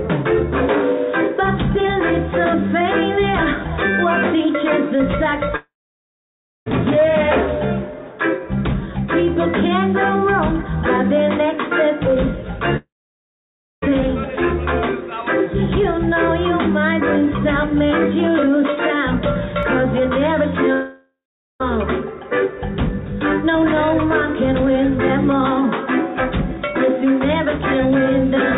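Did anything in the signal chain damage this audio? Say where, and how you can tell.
Yes. The network stage likely shows a long network dropout three times: 5.56 to 6.68 s, 12.77 to 13.84 s, and 20.73 to 21.62 s. Each time, the last sound smears into a fading buzz. Silence follows, about 0.97, 0.94 and 0.47 s. Audio returns later, missing that stretch.

At 19.63 s there is a small jump in the sound. No silence is heard. This points to a dropped buffer (overrun) at the driver or buffer stage. Samples were likely overwritten before being read. A millisecond or two is gone, and the two sides join directly.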